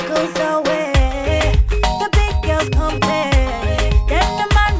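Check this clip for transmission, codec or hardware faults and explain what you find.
No transmission, codec or hardware faults found here.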